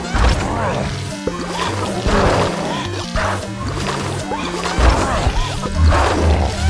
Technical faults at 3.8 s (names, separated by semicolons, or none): none